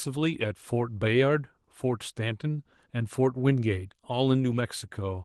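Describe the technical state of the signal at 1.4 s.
At 1.4 s the signal is intact, with no fault present, and the Opus voice compression carrying the speech is working normally there.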